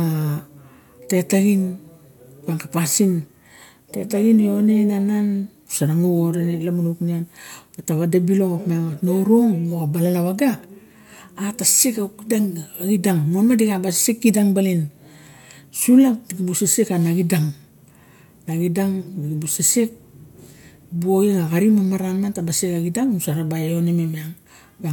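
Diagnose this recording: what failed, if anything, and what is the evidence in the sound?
Nothing stood out on listening to this speech recording.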